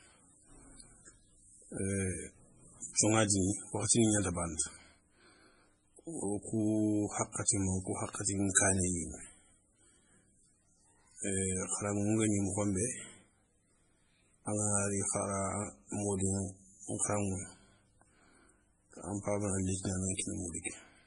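Watery, swirling texture runs through the whole recording, with metallic chirping on s sounds and smeared onsets. The treble is gone: nothing is heard above about 10.5 kHz. This is likely heavy MP3 compression at a low bitrate, which fits roughly 24 kbps. With so few bits, the encoder cuts the top band at a fixed point and drops quieter frequency components, which flicker in and out between frames and produce that swirl.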